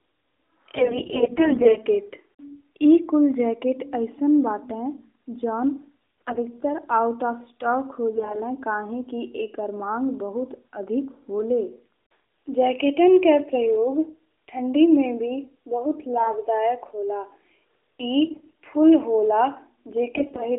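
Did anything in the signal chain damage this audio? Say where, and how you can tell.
Yes. AMR bit errors on the network link damaged the speech at 0.76–1.79 s, 6.21–6.43, 8.16–8.41, 16.18–16.34, 18.26–18.56 and 20.16–20.46 s. Roughly 7 to 10 percent of the weakly protected bits in the 20 ms frames arrived flipped, but the frames still passed their checks, so the AMR-NB decoder placed excitation pulses wrongly and used corrupted gain and spectral values. Pitch and level hold while the speech turns hoarse and gargly. A spectrogram shows smeared, noisy harmonics within the narrowband 200 Hz to 3.6 kHz line band.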